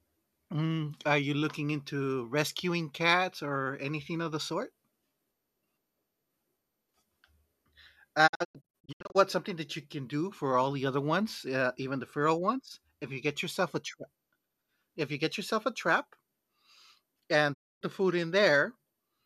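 Digital broadcast dropout: the receiver lost frames and muted, leaving short faded holes totalling 456 ms across 8.26–9.17 s, then a 264 ms gap from 17.53 s ending before "the food".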